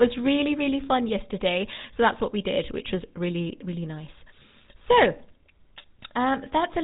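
From start to end, the speech carries GSM full-rate codec damage: a buzzy, gravelly roughness that comes from a vocal-tract model driven by a sparse, regular pulse excitation. The band stops near 3.8 kHz. That grain, rather than a plain band-limit's mere dullness, marks it as heavy coding, likely at 13 kbps.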